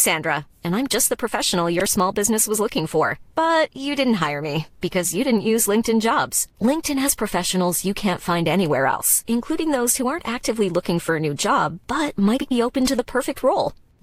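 Around 1.79 to 1.86 s the speech hits a spot of frames out of order: two adjacent chunks got decoded swapped, so that bit plays back-half first, with a garbled flutter. The same thing recurs at 8.91 to 9.00 s and 12.37 to 12.52 s, with swapped blocks of roughly 62, 83 and 93 ms, which fits runs of about four frames each. Nothing goes missing, it's just shuffled.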